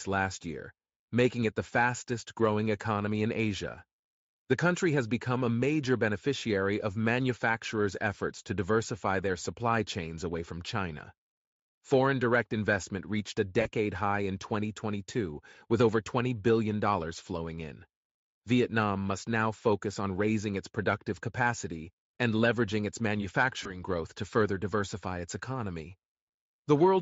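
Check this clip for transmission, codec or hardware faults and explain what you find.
The speech has two dropouts from VoIP packet loss concealed by the speech codec, heard through a Speex stream whose light coding fits about 34 kbps.

VoIP packet loss concealed by the speech codec occurs at 13.61–13.68 s, between "direct investment reached a" and "high in", and at 23.63–23.77 s, just before "growth to further diversify". The gaps point to about 40 ms and 20 ms of missing audio. The decoder filled them by repeating its last pitch and spectral shape at falling gain. The speech smears into a brief buzzy tone or coloured noise that fades, and stays weak until the decoder recovers.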